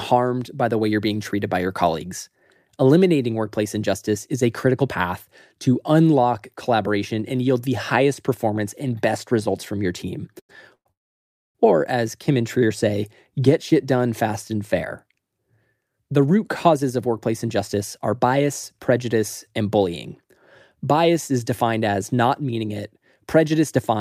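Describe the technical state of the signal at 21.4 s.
At 21.4 s the speech signal is intact, with no audible fault at that moment.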